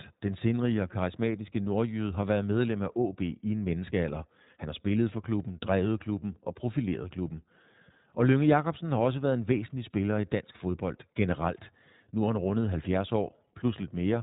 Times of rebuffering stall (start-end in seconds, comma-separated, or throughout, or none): none